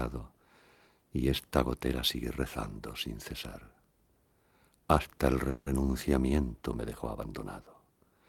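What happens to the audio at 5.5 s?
Right there, from 5.49 to 5.68 s, you get a call audio freeze: the tail of the last sound is stretched into a fading buzz or hiss for about 170 ms, likely because packets stalled and the jitter buffer ran dry. When the audio resumes, nothing's lost; everything after just lands 170 ms late.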